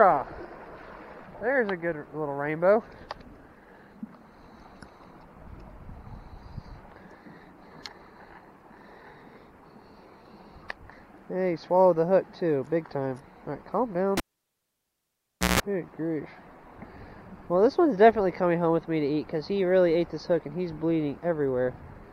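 At 14.17 s there's a cable pulled and plugged in: a sharp pop as the live lead comes out, then close to silence for about 1.38 s. As the plug goes back, the tip makes contact before the ground does, so you get a 163 ms burst of 60 Hz mains buzz picked up on the unshielded connection. A second pop follows as the sound comes back, wrapping up at 15.60 s.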